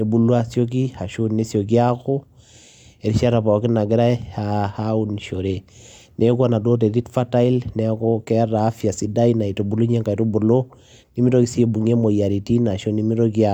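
Nothing stood out on listening to this recording.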